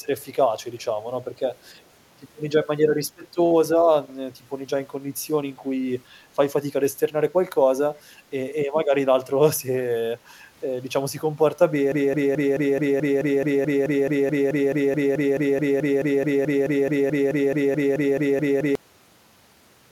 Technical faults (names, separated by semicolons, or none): echo leak; broken-record loop